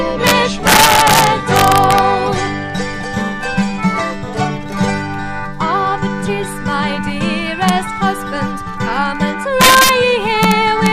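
Integer overflow strikes at 0.27 to 0.31 s, 0.67 to 1.98 s, 7.69 s, 9.61 to 9.89 s and 10.43 to 10.86 s. The signal was pushed past the largest integer, by about 3 to 5 dB, and about 0 dB at 7.69 s. It was not limited, so it wrapped to the opposite sign. Each peak over the limit jumps across the full range. The result is violent cracks on the loud parts. They are much harsher than clipping.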